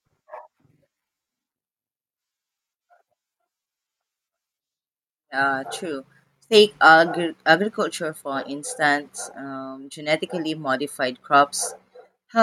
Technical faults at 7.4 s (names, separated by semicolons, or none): none